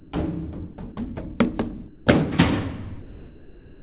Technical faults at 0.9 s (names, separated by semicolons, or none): sound dropped by the voice detector